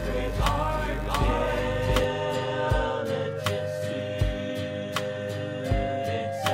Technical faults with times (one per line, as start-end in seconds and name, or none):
0.00-2.04 doubled audio track